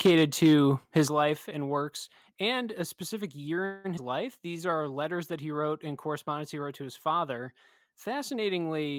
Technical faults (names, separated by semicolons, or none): microphone overload; microphone volume stepped down; call audio freeze; skip ahead; jitter buffer slow-down